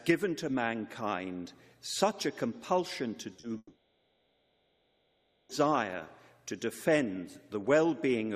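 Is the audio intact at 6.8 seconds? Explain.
Yes, the audio at 6.8 seconds plays through cleanly, with no dropout, click, distortion or other fault at that point.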